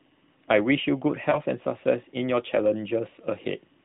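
From 1.30 to 1.40 s, lost AMR speech frames: the narrowband decoder concealed one dropped 20 ms frame, producing a brief dip or warble before recovering.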